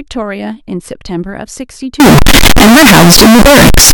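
At 2.0 s the speech abruptly turns into a loud, harsh, nearly square waveform sitting at an almost fixed, high level, and it stays that way until the clip ends at 3.94 s. Background noise comes up to the same level as the speech, though the pitch contour can still be followed. This is likely float read as integer: 32-bit float samples interpreted as 32-bit integers, so the sign and exponent bits now dictate the amplitude.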